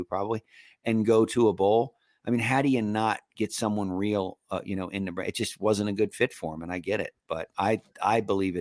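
Nothing in this bit of speech trips any alarm: no dropout, glitch or other technical fault turns up anywhere along the way.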